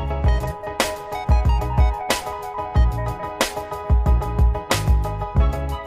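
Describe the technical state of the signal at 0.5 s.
Just after a compressed frames skipped fault at 0.42–0.47 s: whole frames went unplayed, so the audio jumps ahead by about a tenth of a second.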